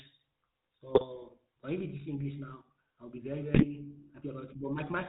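From the start the whole clip carries the GSM full-rate codec's buzzy, gravelly roughness. The vocal tract is modelled and driven by a thinned-out pulse train, which points to a 13 kbps link, and nothing gets through above 4 kHz. The damage is plainly audible.

At 0.94 to 1.05 s, and again at 3.54 to 3.64 s just after "I'll be very", GSM bit errors break the speech into squawks and gargling. Corrupted filter, pitch or gain values reached the decoder for a few frames, warping the spectrum and level.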